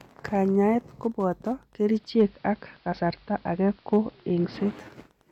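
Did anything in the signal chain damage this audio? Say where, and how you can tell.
Yes. Throughout the clip there is faint, steady ticking at a 102.4 ms interval, just under ten ticks a second, sitting roughly 40 dB below the speech. That regular beacon rate is the signature of Wi-Fi interference. A nearby Wi-Fi transmitter is coupling into the analogue wiring or input circuitry, where a nonlinear junction rectifies its periodic beacon bursts into audible clicks that ride along with the signal.

From 1.72 s to 4.99 s the audio shows digital radio blending to analogue. Over a 469 ms cross-fade the receiver switches to the AM broadcast of the station. The level shifts by about 4 dB and hiss rises to roughly 35 dB below the speech. The receiver lost its digital lock at the reception stage, fell back to analogue, and blended back to digital at 4.99 s.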